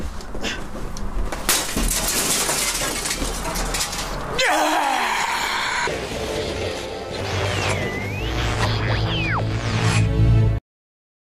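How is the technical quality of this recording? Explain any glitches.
Three loud pops mar the recording. The first is a single loud pop at 3.79 to 3.81 s. A double pop follows at 9.39 to 9.57 s. Both jump roughly 10 dB above the sound, which continues underneath. Each is likely a sudden voltage pulse from a plug, switch, static or driver glitch.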